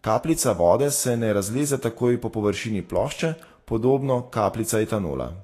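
From start to end, the speech carries plainly audible coding damage, likely Vorbis compression. Nothing is present above 14.1 kHz, and the treble that remains has been quantised so coarsely that its fine detail is replaced by noise of similar energy. The result sounds hissy and grainy, with roughened tones and blurred attacks. The amount of damage points to a low-rate encode, roughly in the region of 35 kbps.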